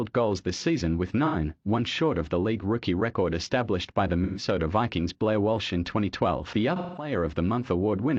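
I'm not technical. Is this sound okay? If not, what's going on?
No. Brief smeared, hissy patches at 1.25 to 1.35, 4.24 to 4.43 and 6.76 to 7.12 seconds are AAC frame loss with concealment: chunks of audio went missing, and the player patched each gap from the sound just before it.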